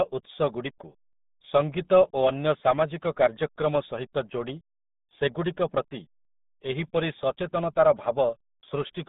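Speech heard throughout through the RealAudio 14.4 codec: nothing survives above about 3.8 kHz, the band sits roughly 150 Hz to 3.7 kHz, and heavy gargly smearing points to an 8 kbit/s dial-up codec. That smearing separates it from clean telephone band-limiting.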